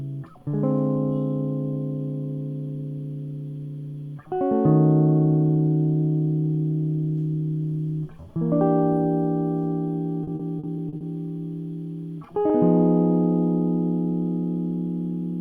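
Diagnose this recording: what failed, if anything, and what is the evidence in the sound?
The network stage failed: repeated packet loss (robotic sound) between 10.23 and 11.04 s of this music. Five packets went missing or arrived too late, and each hole was patched by stretching the preceding audio, so 200 ms of that stretch is concealment. About a quarter of the span is synthetic, with the longest gap 40 ms. The result is a choppy stutter where the music briefly turns robotic and fragments drop out before normal playback returns.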